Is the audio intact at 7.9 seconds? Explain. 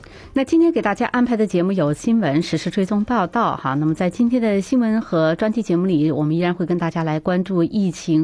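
Yes, the audio is intact at 7.9 seconds, with no dropout, click, distortion or other fault audible at that point.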